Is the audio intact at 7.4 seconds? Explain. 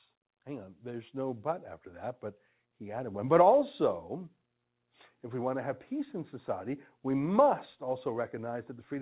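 Yes, the speech at 7.4 seconds is intact, with no dropout, click, or distortion at that moment.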